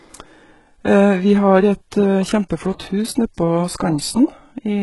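Throughout the speech, treble sounds gritty and lispy above a crossover, stopping near 11.5 kHz, likely HE-AAC compression at around 12 kbps rebuilding highs rather than simply dulling them.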